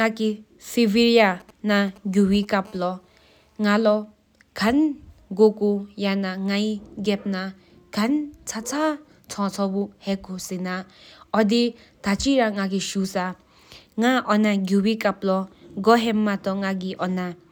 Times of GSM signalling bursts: 1.25-2.45

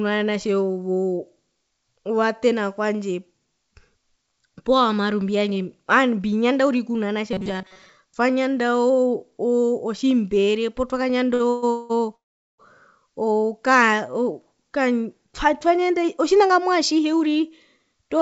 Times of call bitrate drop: none

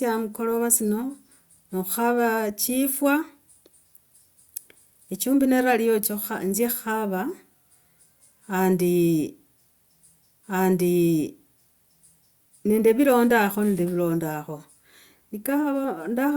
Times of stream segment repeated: 10.43-12.43

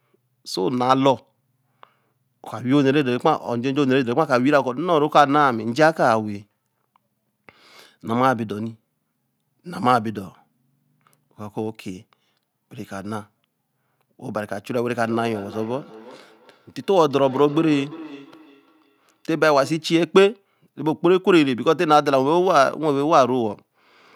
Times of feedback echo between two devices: 14.96-19.96

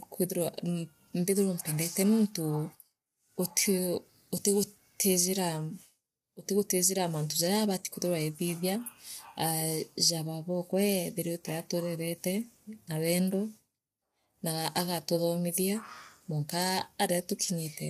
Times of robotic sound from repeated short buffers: none

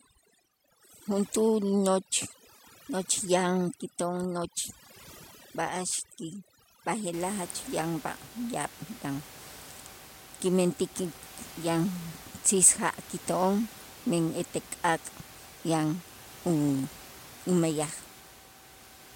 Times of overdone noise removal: 0.00-7.13

